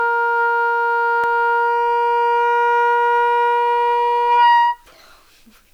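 Low bit depth with dither runs through the whole clip. The audio sits on what sounds like about 9 bits, and dither added before rounding turns the quantisation error into a steady, even hiss, roughly 45 dB below the sound, with no distortion.

A block of digital silence hits at 1.24 s. For about 0.73 ms, which fits a 32-sample buffer left unfilled, the sound cuts out and returns with no fade. The abrupt edges make it a single sharp tick.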